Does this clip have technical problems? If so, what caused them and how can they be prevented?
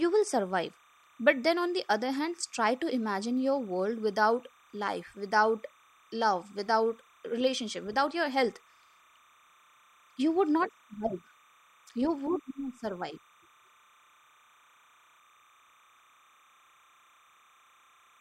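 Yes. A faint, steady chirping warble sits behind the speech for the whole clip, about 35 dB down, flickering between pitches near 1 and 2 kHz. This is timecode bleed: 30-frame linear timecode leaking from a neighbouring track or cable. Route timecode on separate, shielded cabling away from audio lines and keep it off adjacent recorder tracks.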